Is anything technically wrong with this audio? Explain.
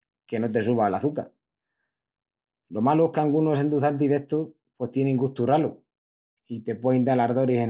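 No, nothing in this speech clip stands out as a technical fault. It has the sound of a normal phone-style call path, with nothing above 4 kHz, which fits a G.711 mu-law codec running at 64 kbps.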